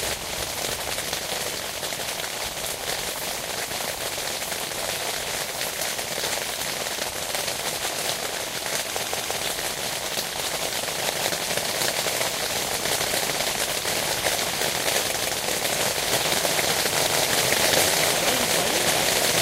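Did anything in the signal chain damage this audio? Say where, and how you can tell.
Yes, at the driver or buffer stage there is a repeated buffer. At 9.05 s a piece of about 171 ms plays three times in a row, running to 9.39 s. At 15.19 s a second piece of the same length plays twice, to 15.36 s. That length fits an 8192-sample buffer that the device replayed when fresh audio arrived late. On the waveform, identical blocks sit side by side with a hard step at each join. A spectrogram shows the same pattern copied block by block, split by thin vertical broadband lines where the joins click.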